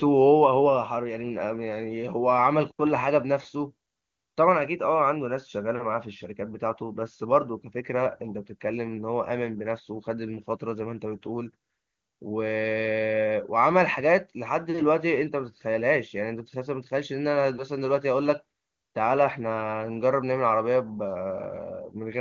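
Nothing stood out on listening to this speech clip, which comes through the AMR wideband (HD Voice) codec at its top rate of 23.85 kbit/s.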